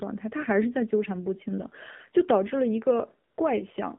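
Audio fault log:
throughout AMR narrowband mobile codec: a low-rate vocal-tract model, consistent with about 7.4 kbps, rebuilds the speech, so it sounds plainly buzzy and synthetic, confined to roughly 150 Hz to 3.6 kHz.
3.30–3.38 s AMR comfort noise: speech frames stop for 80 ms and the receiver inserts smooth synthetic noise, so the real background briefly switches out for a steady hiss.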